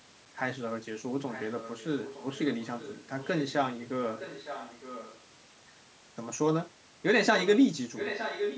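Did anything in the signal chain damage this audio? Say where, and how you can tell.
Yes. Call processing likely failed to cancel loudspeaker pickup, causing echo leak: a copy of the speech trails it by 0.91 s at 1.3–1.86, 2.02–2.39, 2.62–3.53, 4.09–5.2 and 7.95–8.58 s. It is faint at first and nearly as loud as the speech in the last stretch.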